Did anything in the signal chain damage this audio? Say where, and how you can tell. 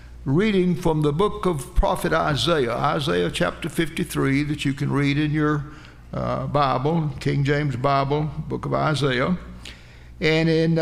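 Yes. Evenly spaced ticks recur every 2.0 s from 1.99 s to 10.0 s, about five in all. These are periodic USB or driver dropouts: a background task briefly stalls the USB bus or audio driver, and a tiny sliver of audio is skipped outright.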